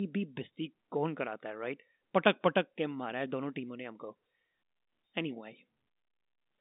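Nothing is technically wrong with this speech clip, which carries the narrow band of an ordinary G.711 telephone line.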